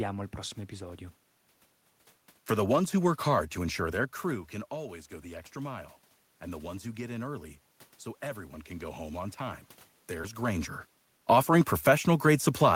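It's a speech clip, and around 4 s the talker drops back from the mic, so the level falls by about 14 dB. From 4.7 to 7.58 s, after "ensure their crew can" and before "so everyone can go", you can hear automatic gain rising: the gain control creeps up about 3 dB, lifting the voice and the room noise together. Then, just after "go home on time", there's a short concealed packet loss at 10.21 to 10.25 s. About 20 ms never arrived, and roughly 15 ms of it was patched by extending the preceding sound before blending back in, so it comes through as a quick smear right around where the talker shifts position again near 10 s.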